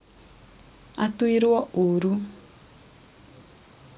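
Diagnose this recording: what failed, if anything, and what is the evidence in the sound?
Nothing failed; no faults heard.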